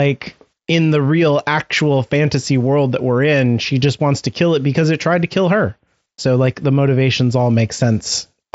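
Nothing stood out on listening to this speech, which comes over the Bluetooth mSBC headset link with its usual wideband limit near 7.7 kHz.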